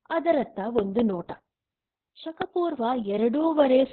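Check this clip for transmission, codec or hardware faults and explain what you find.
There's one fault, and it runs the whole way through: Opus voice compression, pushed hard. The codec is in its SILK speech mode and has dropped to narrowband, so the speech is cut off around 4 kHz and sounds muffled, like an old phone line. The excitation is coded very coarsely, which makes the voice hoarse and a bit robotic. The damage is heavy, which fits a bitrate down around 6 kbps.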